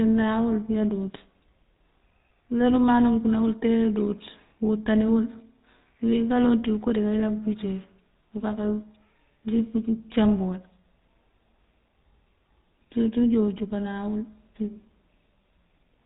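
From start to finish, the speech carries GSM full-rate codec damage. The codec rebuilds the voice from a vocal-tract model excited by sparse, regularly spaced pulses. That leaves a plainly audible buzzy, gravelly roughness. Nothing passes above 3.8 kHz. The bitrate points to 13 kbps.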